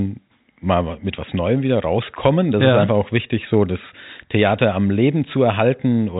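No technical faults can be heard in this speech.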